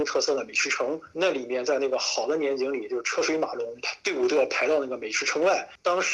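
Nothing is technically wrong with this clip; the audio simply carries the ordinary character of a call codec path.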